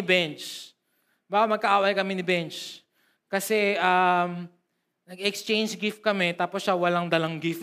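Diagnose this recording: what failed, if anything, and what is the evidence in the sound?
Nothing failed: the speech carries no audible defect at any stage from capture to playback.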